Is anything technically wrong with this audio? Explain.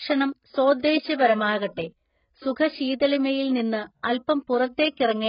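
Yes. AAC compression throughout: nothing above 5.1 kHz, with smeared, warbling speech and fizzy sibilants, likely from AAC-LC at a very low bitrate, fitting roughly 12 kbps.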